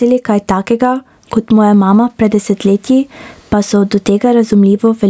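A short speech recording carries gain pumping the whole way through, with the level swinging by something like 15 dB. That sounds like the input gain was likely cranked far too high and a fast limiter or compressor is clamping down on each loud syllable, so dynamics come out squashed. The call-style band limit, with nothing above 8 kHz, is just the normal microphone path.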